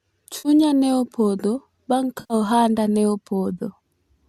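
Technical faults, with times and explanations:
0.38–0.49 s and 2.20–2.34 s: AAC frame loss with concealment. About 70 ms, then 100 ms, is rebuilt from the preceding spectrum, leaving smeared, phasey, noisy patches.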